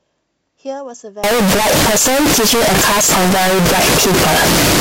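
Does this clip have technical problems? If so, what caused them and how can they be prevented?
Yes. Signed and unsigned mixed up from 1.24 s to the end: 16-bit samples likely read with the wrong sign convention, flipping the top bit so every zero crossing jumps full-scale. Prevent it by declaring sample format explicitly at every interface.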